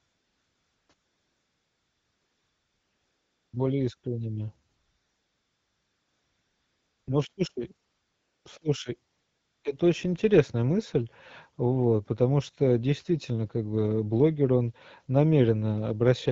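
AMR comfort noise fills the pauses at 0 to 0.89 s, 0.93 to 3.53 s, 3.97 to 4.03 s, 4.67 to 7.07 s, 7.33 to 7.37 s, 7.87 to 8.45 s, and 9.11 to 9.63 s, just before "это очень интересная мысль". In each gap the phone stopped sending speech frames, and the receiver synthesised a steady, smooth hiss in place of the real background. Unlike a noise gate, the gaps never fall to silence. The hiss switches against the clear wideband speech, whose quality fits AMR-WB at 12.65 kbit/s.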